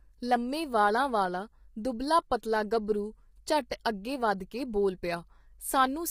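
Low-delay AAC compression runs through the whole speech recording, with heavy roughness, grain, noise between harmonics and a lowered or synthetic top band, likely AAC-ELD at a rate fitting about 24 kbps. Pre-echo at 3.70 s, just before "ਅਗੇ ਵਧ ਕੇ", is an 11 ms hiss: the codec spreads the onset's quantisation noise into the quiet start of its block.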